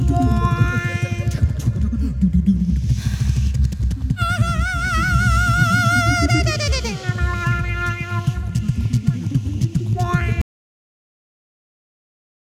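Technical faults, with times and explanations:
10.42–12.51 s: audio dropout to silence. The sound cuts off abruptly into complete silence without room tone until the end, likely a lost input while recording carried on writing zeros.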